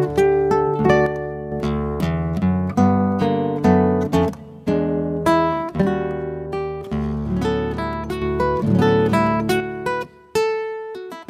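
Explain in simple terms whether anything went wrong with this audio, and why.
One channel drops out at 1.06–1.52, 5.82–8.22 and 9.60 to the end: the sound suddenly turns quieter, likely because one stereo side went missing.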